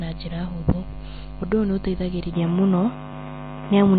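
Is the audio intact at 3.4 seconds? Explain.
No. At 3.4 seconds the speech carries two faults. Throughout, it shows MP3 compression: nothing reaches above about 4.6 kHz, and weak frequency components flicker between frames, giving a watery, swirling texture on sibilants. The damage is plainly audible and fits a bitrate around 24 kbps. From 2.33 seconds to the end, the input has switched to a poorer device, likely another microphone or a headset call profile. Without any gap, the band narrows to nothing above about 3.8 kHz, the tone turns duller and boxier, the level shifts by a few decibels, and a new noise floor appears roughly 30 dB below the speech.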